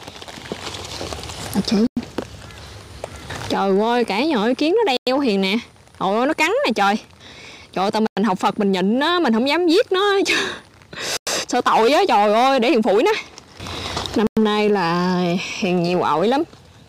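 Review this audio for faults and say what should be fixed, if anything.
Peaks crackle throughout from hard clipping: the signal is driven about 3 dB past full scale, so a small share of samples is sheared flat. Reduce gain before the converter or limiter so peaks stay below full scale.

100 ms holes open at 1.87, 4.97, 8.07, 11.17 and 14.27 s. This is a gap between chunks, where silence is inserted after each 3 s block. Have the player or encoder join chunks seamlessly, trimming padding and scheduling each block on time.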